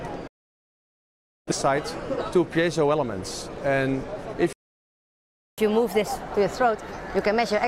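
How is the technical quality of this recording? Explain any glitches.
The recording has three clear glitches: two gaps of silence and a stretch of sped-up, raised-pitch playback at the end.

From 0.27 s to 1.52 s the sound cuts to silence with a very quick fade of about 8 ms, leaving a hole of roughly 1.2 s. This is a digital broadcast dropout. The receiver stopped getting valid frames, either because the signal was lost or because frames failed their checksum, so it muted its output. When good frames resumed, playback picked up later in the programme, and the material sent during the gap is gone.

From 4.53 s to 5.58 s the sound stops mid-flow for about 1.05 s of silence, then carries on. This is a playback stall. The player's output went quiet because it likely either ran out of buffered data or had its processing thread blocked. Once it recovered, the audio resumed, either from where it had stopped or, if the source was live, from a later point.

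From 5.58 s to the end, the sound plays 1.25 times faster, with the pitch raised by about four semitones. This is catch-up at higher speed. After the stall the player holds a backlog, and it resamples that backlog to play it faster so it can close the gap with real time. Speed and pitch rise together because resampling cannot change one without the other. In this clip the faster rate runs right to the end without dropping back.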